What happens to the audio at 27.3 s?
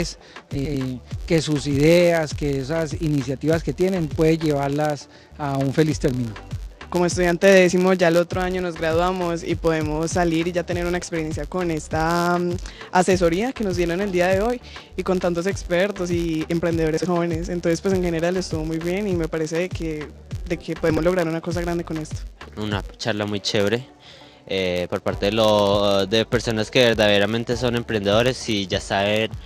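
At 27.3 s the audio carries a buzz at about 86.1 Hz, as it does throughout the clip. This is a filter restarted on every block. It loses its state and starts each block from silence, which fits a 512-sample buffer. Each restart leaves a small transient, and the buzz follows the signal's level.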